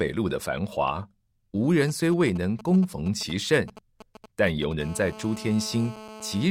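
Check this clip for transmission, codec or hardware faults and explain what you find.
Both faults come from a 2G mobile phone transmitting close to the recording hardware, whose audio circuit rectifies the phone's radio pulses into audible interference.

GSM signalling bursts, 1.80 to 4.73 s: The nearby phone is exchanging control traffic with the network, sending brief clusters of transmissions instead of a continuous stream. Each cluster is pulsed at about 217 Hz, and the audio electronics demodulate it. Across this stretch the speech carries an intermittent, galloping dit-dit-dit of short raspy 217 Hz buzzes. The buzzes sit roughly 15 dB under the speech.

GSM phone buzz, 4.80 to 6.46 s: The phone has moved into an active call and now transmits its time-slot bursts continuously, 217 times a second. Rectified by the same circuit, the pulse train becomes a steady, hard, raspy buzz at 217 Hz with a dense series of harmonics, entirely independent of the speech. 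At about 17 dB below the speech, it runs unbroken to the end of this stretch.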